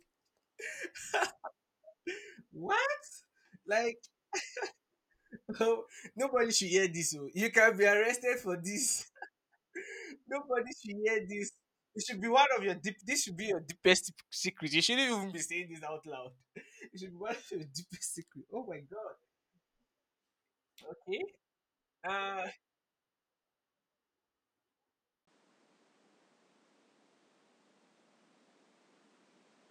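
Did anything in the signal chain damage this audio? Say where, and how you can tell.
Yes. At 25.25 s the sound breaks for about 20 ms, and from there to the end everything above 10.5 kHz is gone, with a new, faint background noise sitting well below the speech while the level stays about the same. This is likely an input switched to a poorer device at the driver stage. A codec dropping bandwidth would narrow the band but would not bring its own noise floor or a gap at the changeover.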